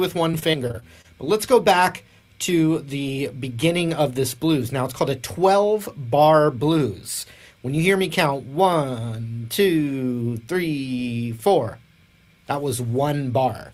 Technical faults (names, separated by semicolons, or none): repeated packet loss (robotic sound)